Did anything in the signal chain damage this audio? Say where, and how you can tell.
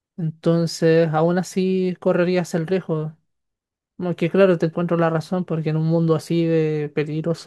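No, nothing along the way seems to have harmed this recording; I can't hear a single spot where any stage of the chain left its mark.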